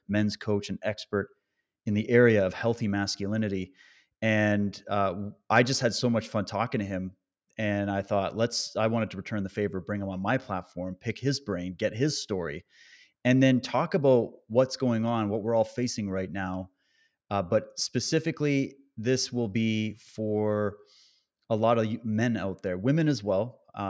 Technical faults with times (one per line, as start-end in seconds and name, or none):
none